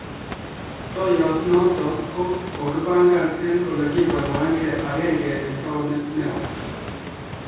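Nothing stood out as a fault on listening to this speech clip.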